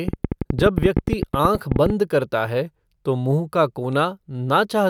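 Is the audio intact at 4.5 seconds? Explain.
Yes, the audio is intact at 4.5 seconds, with no fault audible at that moment.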